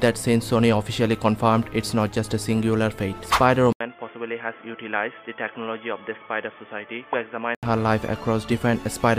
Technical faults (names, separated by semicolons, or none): input switched to a poorer device